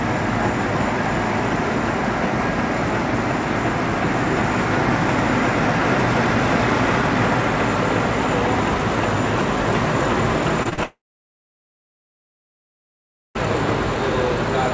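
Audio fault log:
10.63 to 10.67 s, 10.69 to 10.73 s and 10.73 to 10.79 s: short concealed packet loss, gaps of 20 to 40 ms patched by extending the preceding sound, heard as quick smears and wobbles.
10.83 to 13.37 s: long network dropout, likely lost packets. The last sound is stretched into a fading buzz or hiss, then 2.37 s of silence, and 2.52 s of audio never plays.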